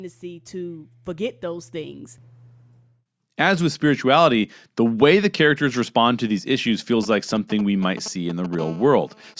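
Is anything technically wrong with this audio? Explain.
Yes, there are three kinds of fault in this speech clip.

From 0.2 to 2.13 s, and again from 3.37 to 4.43 s just before "the way the characters", the speech and background swell together, by about 7 dB and then about 4 dB. This is automatic gain rising: the gain control judged the input too quiet and raised its gain gradually.

From 7.03 to 8.55 s, just after "respond to these issues", a galloping dit-dit-dit of short 217 Hz buzzes intrudes, roughly 15 dB below the speech. These are GSM signalling bursts: a nearby 2G phone sent short groups of radio bursts at a 217 Hz rate, and the audio circuitry rectified them.

From 8.59 to 9.34 s, a hard, steady buzz at 217 Hz, rich in harmonics and about 22 dB below the speech, runs independently of the speech. This is GSM phone buzz from a nearby phone in a call, whose continuous 217 Hz transmission bursts the audio circuit rectifies into sound. 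The lack of content above 8 kHz comes from the call microphone processing.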